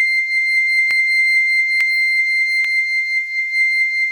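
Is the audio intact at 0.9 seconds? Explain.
No. At 0.91 s the music has dropped samples: a tiny run, a fraction of a millisecond, was likely lost from the stream, so the waveform jumps straight to a later value. That jump is heard as one sharp click, with nothing audibly missing.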